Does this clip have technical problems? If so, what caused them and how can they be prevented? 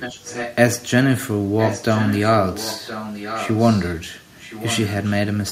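Yes. An echo leak occurs at 0–0.55 s, 1.58–2.31 s, 2.53–3.93 s and 4.38–5.14 s. The speech returns 1.02 s late, about 10 dB down, and fainter in the last stretch. A loudspeaker's echo canceller likely missed it. Headsets prevent this.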